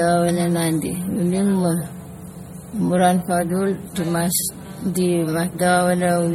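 From start to end, the speech carries a stacked smear of two kinds of codec artefact, with nothing above 16.5 kHz. This most likely comes from transcoding between lossy codecs, consistent with a Vorbis encode then low-bitrate MP3. Unlike single-codec compression, two distinct artefact textures overlap.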